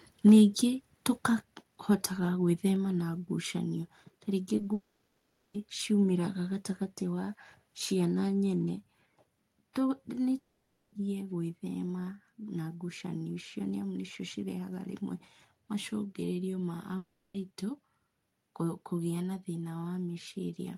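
From 0.26 to 0.42 s the loudest peaks crackle harshly with their tops flattened. This is microphone overload, likely input gain driving the converter about 2 dB past its limit, clipping roughly a tenth of the samples. The level drops abruptly at 0.29 s by about 2 dB and again at 1.29 s by about 4 dB. These are microphone volume stepped down events, likely the call software cutting input gain after the distortion. Between 4.57 and 4.70 s the sound turns choppy. This is repeated packet loss (robotic sound): four short gaps, the longest 20 ms, were patched by continuing the previous sound, about 50 ms in total. Immediately afterwards, from 4.73 to 5.55 s, a smeared buzz replaces the audio for 0.81 s. Similar buzzes fill 10.38 to 10.93 s (0.54 s) and 16.97 to 17.35 s (0.37 s). These are long network dropouts, where no audio likely arrived. The receiver stretched the last sound across each gap, without falling to silence, before the audio resumed with those stretches missing.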